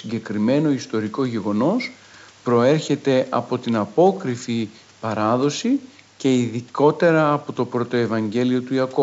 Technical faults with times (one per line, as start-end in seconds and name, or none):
none